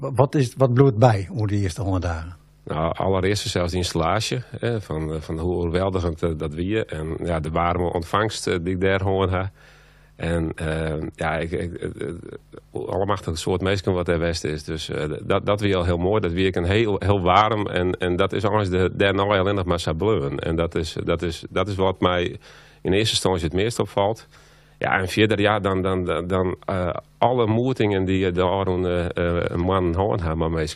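There are no technical faults to describe in time order in this clip.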